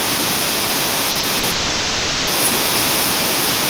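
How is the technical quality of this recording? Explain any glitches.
The technical quality is poor. Echo runs through the whole clip, and a cluster of packet losses ends in a longer dropout.

Echo with no canceller, present throughout: the far end's loudspeaker feeds its microphone and nothing removes it, so the speech returns after the network round trip. A copy about 10 dB quieter trails everything by roughly 0.4 s, sounding thin.

Short concealed packet loss at 1.11–1.18 s, 1.19–1.26 s and 1.39–1.46 s: each time about 40 ms of audio arrived too late to decode, and the receiver bridged the gap by extending the preceding sound before blending back. These gaps are heard as brief smears or wobbles.

Long network dropout from 1.51 to 2.30 s: the most likely cause is an extended interruption in the incoming stream, leaving about 760 ms of real audio missing. Concealment fills the entire gap with a continued, fading buzz-like sound rather than silence, and the speech then resumes with that stretch lost.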